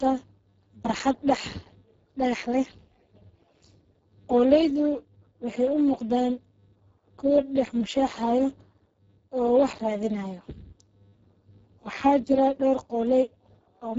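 Speex codec damage runs through the whole clip and is heavy. The speech is noisy and hoarse, which fits a very low Speex setting near 5.8 kbps: too few bits remain to code the excitation signal. Nothing is heard above 7.7 kHz.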